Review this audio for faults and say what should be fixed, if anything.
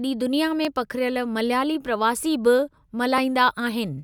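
The likely cause is dropped buffers (overrun): the recording side fell behind, so the hardware overwrote unread samples. The speech skips ahead at 0.65 s, 2.2 s and 3.18 s, each losing only a few milliseconds and the middle one more than twice as much, about 7 ms against 3 ms. Prevent this by giving the capture thread higher priority or a larger buffer so samples are always read in time.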